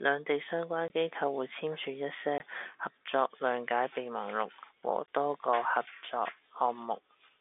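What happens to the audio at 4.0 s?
Nothing goes wrong at 4.0 s: the speech continues intact through that moment, carried on the narrow telephone band of G.711 coding with no dropout, click or other fault.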